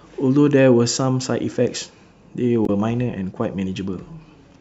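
At 2.65 to 2.70 s the speech is broken by a short glitch lasting about 44 ms, heard as a chirp, click or brief hole, the signature of damaged data in a compressed stream. Corrupted bytes there left the decoder unable to read those frames correctly, so it lost sync and resynchronised at the next valid frame header.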